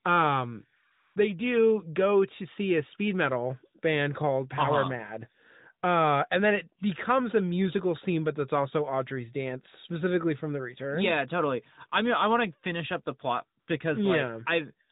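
From 0.92 to 1.16 s, AMR comfort noise replaces the real background for 240 ms. The phone treated the talker as silent and sent no speech frames. The receiver filled the gap with synthetic noise built from a rough level and spectrum. The result is a smooth, steady hiss that switches in, then out. The same happens more briefly from 13.60 to 13.68 s, lasting 80 ms. The mild narrowband coloring elsewhere fits a high-rate AMR-NB mode.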